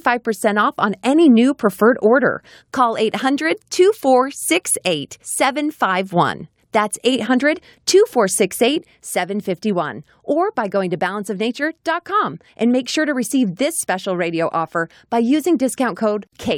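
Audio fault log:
8.78 to 16.58 s, sudden gain jump: the speech and the background noise drop together by about 4 dB in a single step, with no fade, and stay lower to the end. This is likely a digital gain change applied between consecutive samples without a ramp.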